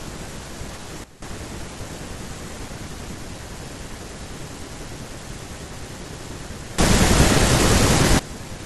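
At 1.04 s the speech and its background noise drop together by about 14 dB in a single step, then snap back at 1.22 s. From 6.78 s to 8.19 s they jump up by about 19 dB, again with no ramp in or out. Both are sudden gain jumps, likely from a digital gain setting applied instantly between one sample and the next, which is why the noise floor moves with the speech.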